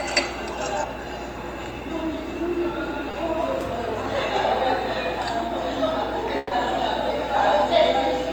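A recording of everyday sounds with two packet-loss faults, one brief and one longer. At 3.11 to 3.15 s there is short concealed packet loss: about 20 ms of audio failed to arrive in time, and the receiver filled the hole by extending the sound that came before it, then merged back into the real signal. The result is a quick smear or wobble rather than a noticeable gap, and nothing afterwards is displaced. At 6.37 to 6.53 s a burst of packet loss produces a different effect. About 140 ms went missing in one run, too long for a seamless patch. The receiver kept repeating the preceding sound while gradually fading it, giving a held buzz or dying hiss with no true silence, before playback resumed further on with that stretch of audio gone. The length of the repair and the audible fade are what separate the burst from the brief smear earlier.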